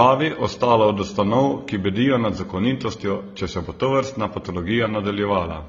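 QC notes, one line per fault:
Throughout: transcoding between lossy codecs. The speech carries two kinds of coding damage at once, a dulled top end plus smeared, warbly high-frequency texture. This is likely low-rate AAC-LC, near 24 kbit/s, re-encoded as HE-AAC near 32 kbit/s, which re-codes the earlier artefacts and adds its own.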